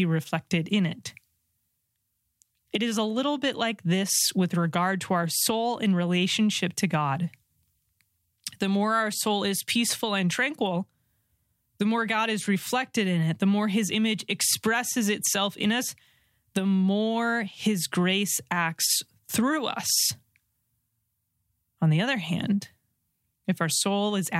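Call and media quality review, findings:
Nothing to flag on this speech recording; no audible problems turned up anywhere in it.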